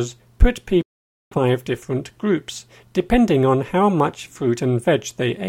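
From 0.82 to 1.38 s the sound cuts out completely for roughly half a second, then returns further along, as though it kept playing through the gap. This is a Bluetooth dropout, likely caused by audio packets reaching the headphones too late and being discarded.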